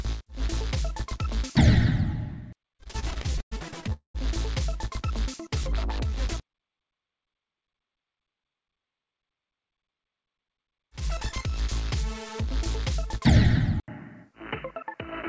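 From 2.78 s to 3.93 s the audio shows repeated stalls (stutter). The jitter buffer ran dry fourteen times as packets arrived late, and each time the receiver stretched the last sound to cover the wait. About 308 ms was filled this way, roughly a quarter of that stretch, with the longest single gap at 108 ms. Nothing is lost, but the sound hitches and drags in a rapid, uneven judder.

Directly after, from 3.93 s to 4.16 s, comes a call audio freeze, likely from packets held up in the network long enough to empty the buffer completely. The receiver bridged 219 ms, first carrying the last sound forward and then dropping to silence for about 120 ms. Playback then resumes where it stopped, so the overall delay has grown by 219 ms. This is a hard gap inserted into the audio, not a loss of content.

Between 5.25 s and 6.28 s there is a jitter buffer slow-down. To rebuild its reserve, the receiver repeated short pitch-period segments, adding 69 ms to that second of audio. 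Playback runs at about 94% speed while the pitch stays put, so sounds come out slightly drawn out and lagging.

At 13.80 s the input switched to a poorer device, likely a change of microphone or a headset call profile, and this lasts to the end. An 80 ms silence marks the switch. After it, the band is narrower than the 8 kHz band of the call path before, which fits G.722 at 64 kbps. The result is a dull, boxy tone, about 5 dB quieter, with a new noise floor roughly 40 dB below the signal.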